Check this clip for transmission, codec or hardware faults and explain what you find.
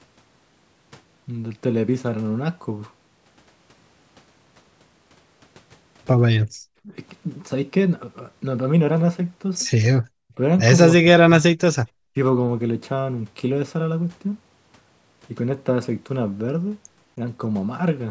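Yes, two echo-canceller faults can be heard in this speech clip. The top end stops near 8 kHz, as normal call processing does.

Background gated by the echo canceller: this happens at 6.52–6.56 s and 10.01–10.08 s. The canceller heard loudspeaker output and cut the microphone hard. The room sound drops by about 37 dB for 40 ms, then 70 ms, and comes straight back.

Speech suppressed in double talk: this happens at 6.84–6.93, 10.36–10.40, 10.97–11.09, 11.29–11.57 and 12.13–12.17 s. The voice dips in short pieces. The dip is slight near 10.4 s and deepest, about 40 dB, over roughly 0.3 s at 11.3 s. Both sides likely talked at once.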